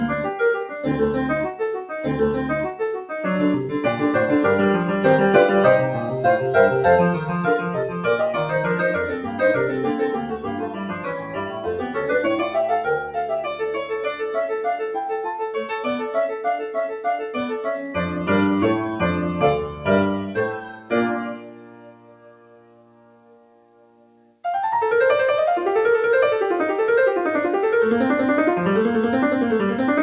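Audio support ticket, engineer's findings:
Noise suppressor applied to music or sounds, whole clip. Speech-tuned suppressor left active, treating held tones, ambience and tails as noise. Gain swings by roughly 15 dB, so attacks pass while sustains sink, causing pumping and thinning. Waveform: envelope dips after each onset. Spectrogram: sustained partials fade or flicker, reverb tails clipped short against the 4 kHz ceiling expected from the G.711 mu-law call path.

Sound cut by the noise suppressor at 9.2–9.41 s (about 6 dB), 10.2–11.97 s (about 10 dB), 16.31–17.36 s (about 9 dB), 19.63–19.87 s (about 8 dB), 20.24–20.92 s (about 12 dB), 21.22–24.44 s (about 13 dB). Steady or decaying material is pushed down, with the longest run lasting about three seconds. Waveform shows an amplitude trough. Spectrogram shows the band darkening and tails truncated.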